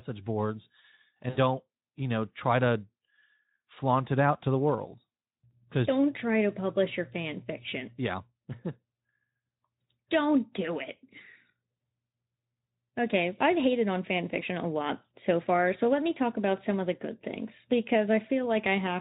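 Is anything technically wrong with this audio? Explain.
Yes. VoIP packet loss concealed by the speech codec occurs at 1.29–1.38 s, just before "don't you know try", and at 5.49–5.54 s, after "out to the world". The decoder fills the missing audio by extending its last pitch and spectral shape with falling gain, so the speech briefly smears into a buzzy tone or coloured noise that fades. The first gap is about 60 ms, which fits three lost 20 ms frames. The second fits a single lost frame.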